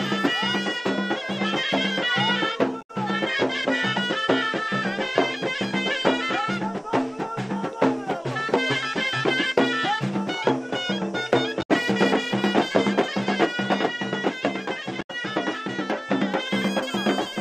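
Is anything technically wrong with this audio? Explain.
Yes, there is damaged data in a compressed stream, at 2.78 to 2.91 s, 11.59 to 11.70 s and 14.98 to 15.10 s. Corrupted bytes make the decoder misread frames and hunt for the next header, producing brief glitches of about 0.12 s, unlike the silent gaps of a plain dropout.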